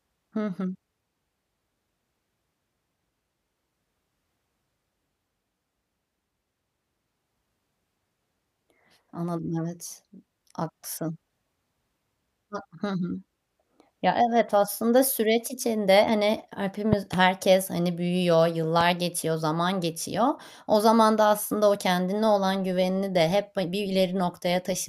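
Loud pops: a double thump at 16.93–17.16 s after "aslında süreç içinde hani", then a single pop at 18.81–18.83 s, both well above the speech. These are likely voltage spikes from a plug, switch or static.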